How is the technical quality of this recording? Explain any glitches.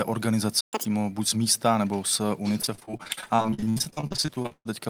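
The recording has three clear glitches: a brief dropout near the start, a fast chipmunk-like burst right after it, and a long choppy, robotic stretch in the second half of the speech.

At 0.61 s the speech cuts to silence for about 120 ms, until 0.73 s. This playback stall most likely means the player ran short of buffered data, or its thread was briefly blocked, so nothing reached the output.

From 0.73 to 0.85 s, just before "buď z místa nebo", the speech rushes by at double speed, with pitch raised by roughly ten semitones. This is catch-up at higher speed: the player resamples its backlog to recover the time lost in the stall.

From 2.61 to 4.67 s, after "z místa nebo z", the sound turns choppy, with dozens of small holes up to 128 ms long. This is repeated packet loss (robotic sound). Each lost packet is patched by extending the previous sound, and 44% of this span is that filler.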